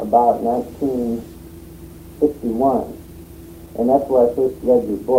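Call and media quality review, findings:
Jitter buffer speed-up, 3.06 to 5.11 s. Audio runs about 8% fast at unchanged pitch, sounding hurried. Receiver jitter buffer overfilled, then trimmed short pitch-period chunks repeatedly to cut delay. Roughly 150 ms removed in total.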